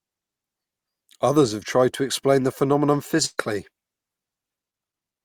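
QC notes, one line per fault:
3.25–3.40 s burst of packet loss: after "to explain the phenomenon" the last sound is held and faded rather than silenced, then resumes with 120 ms skipped.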